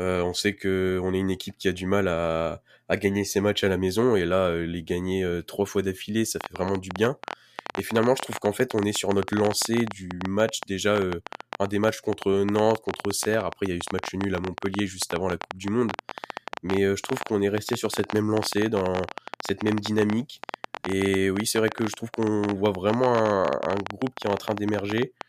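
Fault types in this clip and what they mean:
Train of clicks: from 6.41 s, just after "trois fois d'affilée ça", to 25.22 s, around 300 similar pulses at about 13.9 per second, unevenly spaced, tick over the speech and its pauses, peaking roughly 15 dB above it, likely from nearby equipment interference or a faulty connection or power supply.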